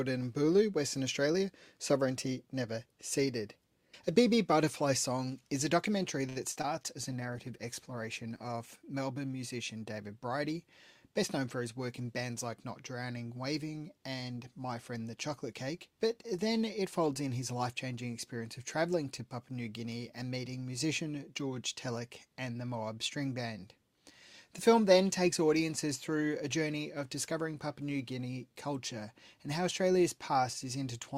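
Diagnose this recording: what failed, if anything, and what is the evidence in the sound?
Network jitter buffer: a short stall from a late packet at 6.29 s holds the sound for 62 ms, then resumes with nothing lost, unlike concealment.

Network packet loss: short concealed packet loss at 6.52 s (40 ms) and 6.62 s (20 ms) leaves brief smears where real audio is missing and extrapolated.

Codec rate control: a call bitrate drop from 64 to 20 kbps, 7.12 to 10.01 s, bottoming out for about 1.6 s, makes the sound coarse and dull throughout rather than in ticks.

Jitter buffer: a speed-up from 16.77 to 17.43 s plays at 108% with unchanged pitch, trimming roughly 50 ms of pitch periods, so the sound runs hurried.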